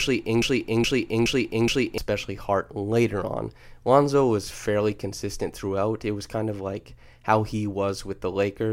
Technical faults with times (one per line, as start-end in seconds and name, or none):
0.42-1.98 broken-record loop